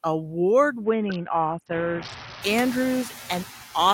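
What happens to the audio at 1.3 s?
At 1.3 s the Bluetooth link is in a SBC bit pool drop lasting from 0.84 to 2.43 s. Congestion forced the encoder to spend far fewer bits, consistent with a bit pool cut from 31 to about 6 and roughly 55 kbps. The top sub-bands lose their bits and the rest are coarsely quantised, so the speech turns dull and gritty until the rate recovers.

Throughout the clip, a noise suppressor pulls down the bands it judges to be steady noise by about 5 dB, frame by frame. Around 1.3 s this leaves the residual background noise sinking and swelling with the speech.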